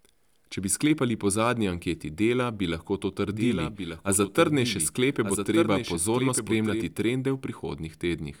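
From 3.28 to 6.84 s, after "bi lahko to", a doubled audio track appears: a second copy about a second behind and somewhat quieter, likely from a slower capture path. Unlike an echo, it neither decays nor colours the sound, and it starts and stops abruptly.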